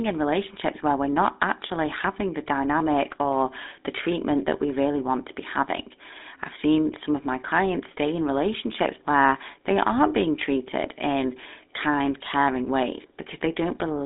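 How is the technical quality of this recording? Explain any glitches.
Quality is poor, with plainly audible codec damage throughout. GSM full-rate codec coding, consistent with 13 kbps, rebuilds the speech from a vocal-tract model driven by sparse pulses. It confines the audio to roughly 250 Hz to 3.7 kHz, with nothing above 3.8 kHz, and leaves a buzzy, gravelly roughness.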